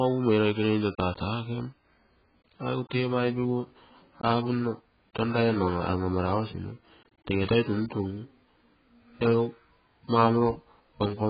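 Speech, heavily damaged throughout by what is likely AAC compression: nothing survives above 4.8 kHz, and the remaining band warbles and smears, pointing to roughly 12 kbps. A plain low-pass filter would dull the sound without that watery, fizzy texture on sibilants.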